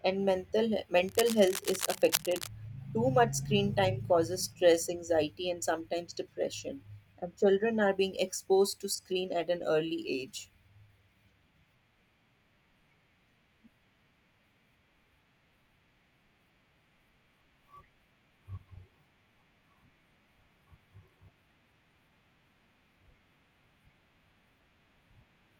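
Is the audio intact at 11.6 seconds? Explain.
Yes, the audio is intact at 11.6 seconds, with no fault audible at that moment.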